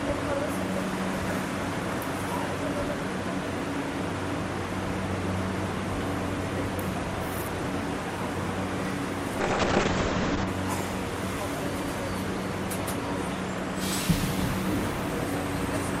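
At 9.42 s there's a call bitrate drop that lasts until about 10.53 s. The bandwidth estimate collapsed, so the encoder was squeezed down to a tiny bit budget, which fits a fall from around 96 kbps to roughly 6 kbps, and it sits at that floor for about a second. You hear the audio go coarse and watery, and the top end is lopped off from 20 kHz down to 8 kHz, so it turns muffled until the rate climbs back.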